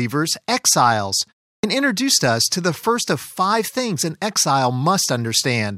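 At 1.58 s, after a pause of about 0.34 s, the sound resumes with a clipped start after a pause. The output path had gone idle in the gap and took roughly 55 ms to wake, so the opening of "introduced us to the" is swallowed and the speech bursts in mid-onset. On a waveform, the envelope jumps from flat silence straight to speech level at 1.64 s. On a spectrogram, the energy appears as a hard vertical edge, with no soft onset before it.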